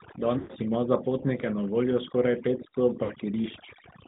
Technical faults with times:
0.00-4.07 overdone noise removal
0.00-4.07 AMR narrowband mobile codec
0.38-0.53 lost AMR speech frames
3.04-3.13 lost AMR speech frames

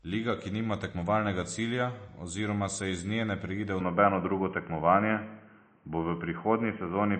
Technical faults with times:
0.00-7.19 MP3 compression
3.81-7.19 input switched to a poorer device

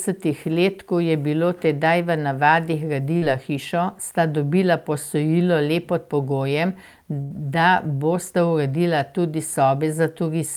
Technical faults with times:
3.17-3.23 short concealed packet loss
7.21-7.32 burst of packet loss

